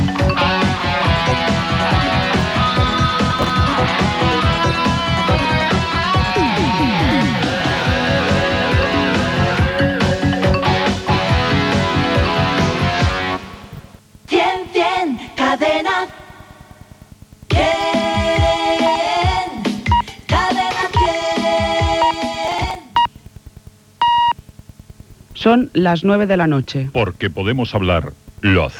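Processor overload crackle appears from 3.31 to 3.50 s and again from 22.48 to 22.75 s. The processor repeatedly misses its buffer deadlines, leaving short skipped gaps with hard edges, which fits buffers of around 10 ms. Roughly ten, then fifteen, drop out, heard as brief gritty tearing bursts.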